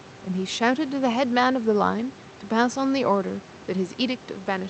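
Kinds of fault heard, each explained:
No kinds of fault are heard in this speech, so there is none to explain.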